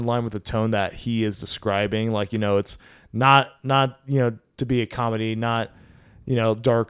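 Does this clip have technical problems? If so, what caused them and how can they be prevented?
No, the speech in this recording comes through without any audible technical fault, so nothing needs preventing.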